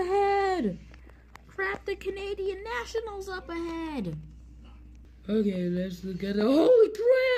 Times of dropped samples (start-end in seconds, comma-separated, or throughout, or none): 2.46, 4.21, 5.77